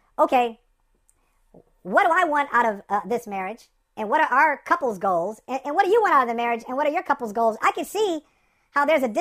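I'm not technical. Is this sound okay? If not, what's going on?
No. The whole clip has a wrong sample rate problem: it's playing about 1.38 times too fast, so the speech sounds rushed and roughly five and a half semitones too high. That fits audio recorded at 32 kHz being played back at 44.1 kHz.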